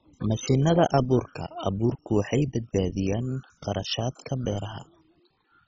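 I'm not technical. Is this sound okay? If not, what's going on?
No. From start to finish the speech sounds dull, with a gurgling, grainy roughness. Nothing above about 7.3 kHz comes through, so the crisp top of the sound is missing. This is most likely MP2 compression squeezed very hard. The format splits sound into narrow bands, switches upper bands off when it runs short of space, and roughly approximates the rest. Plain muffling would only sound dull and smooth. Here the bands flicker in and out, which causes the bubbly texture.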